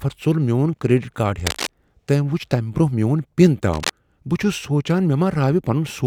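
At 1.47 to 1.68 s and again at 3.73 to 3.90 s, cable scratch noise cuts in. Dense, uneven bursts of scratching rustle over the speech, only a little quieter than it. The likely cause is a worn cable or connector being moved.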